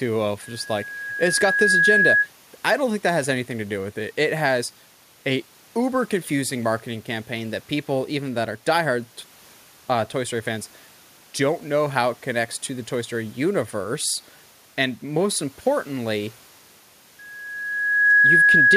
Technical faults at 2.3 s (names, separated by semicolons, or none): loudspeaker feedback squeal